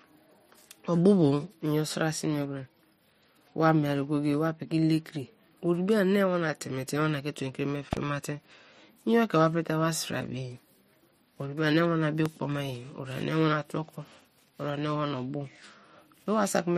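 A loud pop, a double thump from 7.93 to 7.99 s and a single one from 12.26 to 12.28 s before "ma ye ori", peaks about 15 dB above the speech, likely from a voltage pulse such as static or a switch. Unlike a dropout, the speech continues underneath.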